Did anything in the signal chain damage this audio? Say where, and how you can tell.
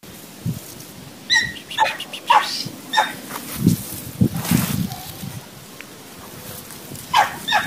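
Yes, at the codec: a corrupt frame was decoded from about 1.72 to 1.94 s, spanning roughly five frames with flipped bits. The decoder played the damaged data anyway, so misread gains and codes produce a loud chirp or burst of noise peaking around -5 dBFS at wrong frequencies.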